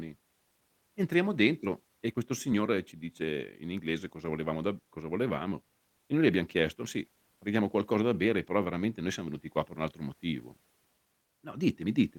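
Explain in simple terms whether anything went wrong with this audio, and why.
Clock drift between sender and receiver runs through the whole clip. The sending device's clock ran about five percent fast, so sound arrived quicker than the receiver played it, and its waiting buffer kept filling up instead of staying steady.

Repeated timing corrections are heard from 0.19 s to the end. To keep up with sound arriving at 105 percent speed, the receiver kept cutting out tiny pieces of speech at uneven moments, which, if noticed at all, comes across as small hiccups and a slightly unsteady pace.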